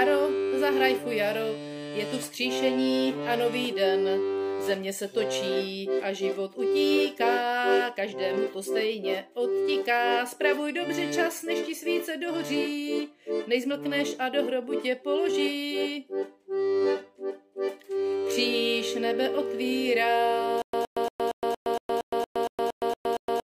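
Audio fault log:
20.62–23.44 s, stutter with silent gaps: from 20.62 s to the end of the clip, the same fragment of about 116 ms plays and then drops into about 116 ms of digital silence. This repeats at an even 232 ms period, 12 times, with nothing new getting through. The likely cause is a stalled player or stream replaying its last buffer on each retry. The true silence between bursts sets it apart from a plain loop, which has no gaps.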